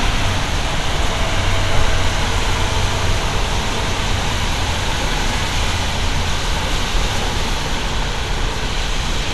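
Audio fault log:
Throughout, MP2 compression: dull, gurgling, granular, nothing above 12.2 kHz; likely Layer II coding starved near 80 kbps, switching off upper sub-bands.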